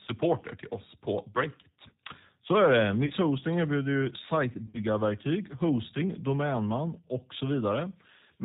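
G.729 codec coding runs through the whole of this speech recording, and its damage is plainly audible. Nothing above 4 kHz survives. The voice has the rough, synthetic texture of speech rebuilt from a vocal tract filter, a pitch predictor and a few pulses per 5 ms subframe, a sound that fits G.729A at 8 kbit/s.

VoIP packet loss concealed by the speech codec occurs twice. The first is at 3.06–3.12 s, right after "är det", where about 40 ms of audio goes missing, consistent with four lost 10 ms frames. The second is at 4.66–4.82 s, after "erbjuder ju", where roughly 70 ms is lost in pieces scattered over 80 ms, with the longest gap 40 ms. In each gap the decoder stretched its last pitch and filter state while lowering the gain, so the sound turns into a buzzy tone or coloured noise that fades. Because each frame builds on the one before, the voice stays weak or distorted for tens of milliseconds after packets return.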